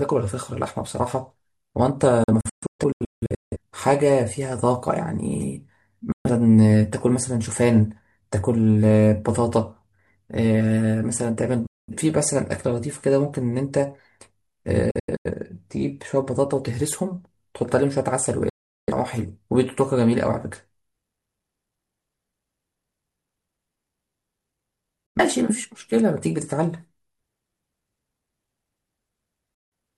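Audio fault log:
2.24–3.56 s, 6.12–6.30 s, 11.67–11.93 s, 14.91–15.31 s, 18.49–18.92 s, 25.06–25.20 s, 29.54–29.72 s: digital broadcast dropout. The receiver mutes with a 3 ms fade while frames are lost, and the sound resumes later rather than being repeated or smeared as in concealment. The first and fourth events break into short scattered holes, with the longest silent runs 170.7 ms and 85.3 ms. Gap lengths are multiples of about 43 ms, which fits whole corrupted frames being dropped.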